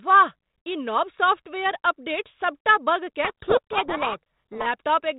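Speech coded as G.726 ADPCM, band-limited below 4 kHz with a light grain consistent with 32 kbit/s, breaks down from 3.24 to 4.67 s, right after "नव सॉफ़्टवेयर अपडेट सभटा". There a codec payload misread buries the speech in harsh distortion: the decoder takes the G.726 code words with their bits in reversed order, so every sample difference it applies is wrong. On a spectrogram that stretch fills with dense broadband hash up to the 4 kHz ceiling, and the waveform turns jagged and noise-like.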